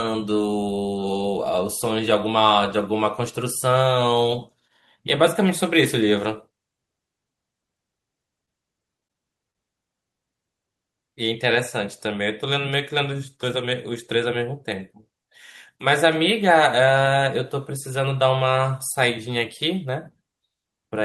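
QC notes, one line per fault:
8.45–8.49 s, short concealed packet loss: about 20 ms failed to arrive and was filled by extending the preceding sound, a single brief smear rather than repeated choppiness.
8.97–9.56 s, repeated packet loss (robotic sound): five gaps, the longest 35 ms, each patched by continuation, so about 15% of the stretch sounds choppy rather than one isolated blip.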